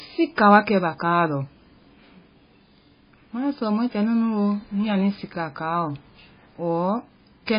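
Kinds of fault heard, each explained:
Low-bitrate audio saved at a high bitrate: the speech has nothing above 5.1 kHz and carries the smeared texture of very low-bitrate MP3, likely left by an early pass near 16 kbit/s. Re-encoding at something like 165 kbit/s afterwards brings none of that back.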